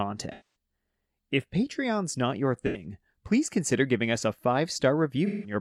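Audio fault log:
0.32 to 0.55 s, 2.66 to 2.85 s and 5.26 to 5.54 s: AAC frame loss with concealment. Chunks of the stream went missing, about 256 ms, 85 ms and 171 ms' worth, and the decoder patched each gap by reusing the last good spectrum. That's why the speech turns smeared and a bit noisy or phasey there instead of dropping out cleanly. The longest patch is the one near the start.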